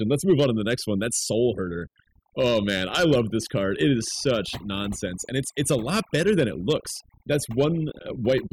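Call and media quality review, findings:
Overdone noise removal, throughout: near-silent background with twinkling specks. Aggressive spectral gating cuts bands near the noise estimate; unlike codec smearing, the gaps follow level, not bitrate.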